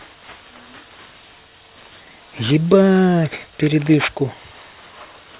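Speech with aliasing all the way through: sibilants sound gritty and metallic, folding back around 4 kHz at roughly 15 dB below the signal, which fits a 16 kHz to 8 kHz downsample without anti-alias filtering.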